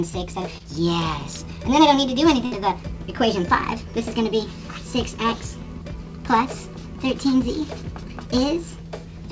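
At 0.58 to 0.62 s there is a short concealed packet loss: about 20 ms of audio arrived too late, and the receiver bridged it by extending the preceding sound. It is heard as a brief smear, and a spectrogram shows a smoothed patch with harmonics briefly repeated rather than evolving.

From 2.46 to 2.53 s a burst of packet loss cuts out about 60 ms. The receiver continued the last sound and let it decay, giving a held, fading tail. On a waveform the amplitude tapers before the real signal returns, and a spectrogram shows flat, repeated frequency bands over that span. The band above 8 kHz stays empty throughout, which points to a G.722 call codec at roughly 64 kbps.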